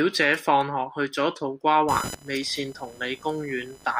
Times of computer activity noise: 1.88-4.00

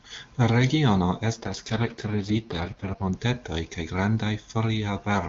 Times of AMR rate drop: 1.33-3.14

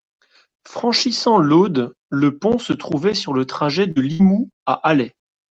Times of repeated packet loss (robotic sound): 3.91-4.69

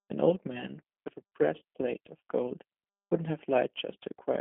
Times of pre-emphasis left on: none

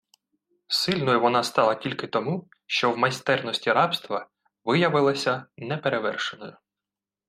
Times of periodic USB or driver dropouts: none

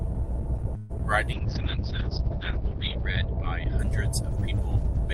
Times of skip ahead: none

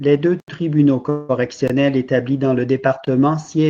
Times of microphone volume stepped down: none

